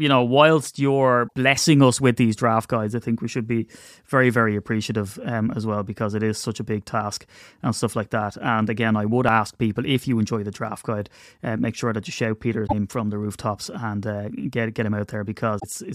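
The speech jumps ahead three times, at 1.27 to 1.32 s, 12.66 to 12.73 s and 15.58 to 15.64 s. Each glitch is a brief burst of chirpy noise or a short hole, about two to three 26.1 ms frames long. The likely cause is a broken MP3 bit reservoir after frames were cut out.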